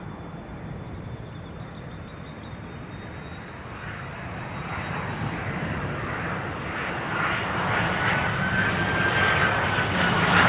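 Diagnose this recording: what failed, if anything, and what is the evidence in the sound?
Nothing stood out on listening, with the sound sitting in the narrow band expected of a call path, no content above about 4 kHz, which fits a standard telephone codec.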